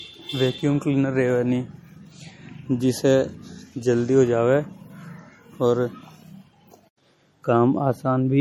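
Speech with low-bitrate audio saved at a high bitrate throughout, likely an MP3 near 48 kbit/s re-encoded near 320 kbit/s. On a spectrogram, the first encoding's smeared artefacts remain beneath a top edge at 20.1 kHz.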